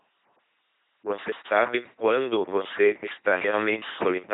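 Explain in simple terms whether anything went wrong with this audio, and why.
The whole recording sounds like a buzzing, mechanical robot talking, flat and dull, with no crisp top end; nothing above about 3.8 kHz survives. This is the LPC-10 vocoder, an old military speech codec. It doesn't keep the real voice. It keeps only a rough outline of the mouth's shape and rebuilds each moment from either a steady buzz or a hiss. That gives the synthetic tone, and here the damage is heavy.

On top of that, the sound keeps dropping out briefly and regularly: short holes of 23 ms at 0.37, 0.89, 1.42, 1.94, 2.46, 2.99, 3.51 and 4.03 s. This is a gap between chunks. The audio was handled in half-second pieces, and a bit of silence was slipped in at each join, so nothing is missing but the flow is interrupted every half second.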